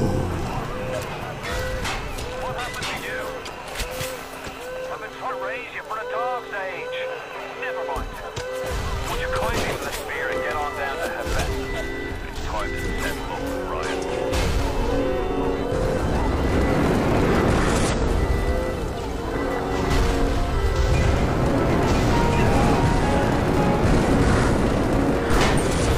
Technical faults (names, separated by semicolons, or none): damaged data in a compressed stream